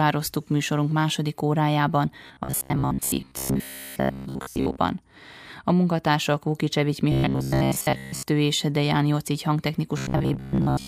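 After "műsorunk második órájában", from 2.27 to 4.78 s, then 7.12 to 8.30 s and 9.98 to 10.88 s, the speech becomes a rigid, metallic 66.7 Hz buzz. This is likely robotic sound from repeated short buffers, with a 15 ms slice repeating in place of most of the real audio. Unlike irregular stutter, the buzz holds that one fixed rate.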